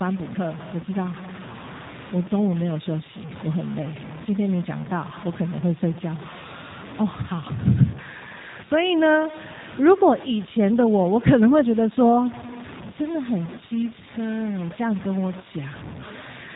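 A speech recording carries two faults for its full length. A grainy, signal-following distortion sits only about 15 dB below the speech, turning quiet passages gritty. The likely cause is low bit depth without dither, roughly 6 bits truncated. Zoomed in, the waveform shows coarse stair steps, and the spectrogram shows broadband grit that rises and falls with the speech. Plainly audible G.729 codec damage makes the speech rough and synthetic, which fits G.729A at 8 kbit/s. On the spectrogram, all energy stops at a hard ceiling at 4 kHz.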